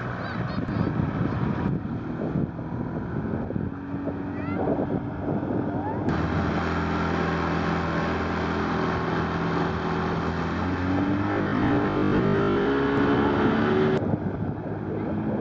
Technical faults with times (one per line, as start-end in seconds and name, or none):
11.32-12.68 robotic sound from repeated short buffers